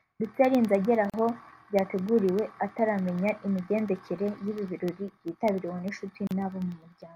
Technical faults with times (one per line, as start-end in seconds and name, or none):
0.15-7.02 periodic USB or driver dropouts
1.10-1.14 gap at a join of encoded pieces
6.27-6.31 gap at a join of encoded pieces